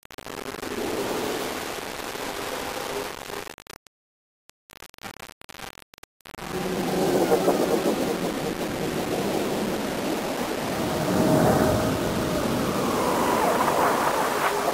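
A recording of sounds, grainy and gritty throughout, with signal-following distortion roughly 10 dB below the signal. The likely cause is low bit depth without dither, consistent with rounding to about 4 bits.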